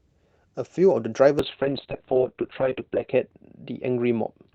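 From 1.4 s to the end, a call bitrate drop makes the speech rough and watery, and the top end falls from 8 kHz to 4 kHz, which fits Opus dropping to about 6 kbps. It stays continuous and degraded rather than breaking into the gaps of packet loss.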